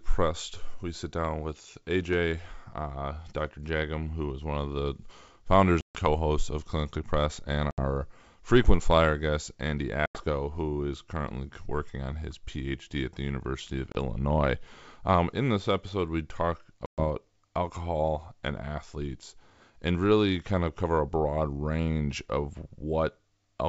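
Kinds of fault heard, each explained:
Packet loss on an ADPCM call: Five stretches of the speech drop out and are filled with silence, the longest about 140 ms after "one of the founders", others before "frequent flyer guest" and "who is currently working". Each gap has hard edges. Because ADPCM codes only the change from a predicted value, the decoder's predictor and step size lose track of the sender's. The speech then comes back at the wrong level or with a click and some distortion, settling within some tens of milliseconds.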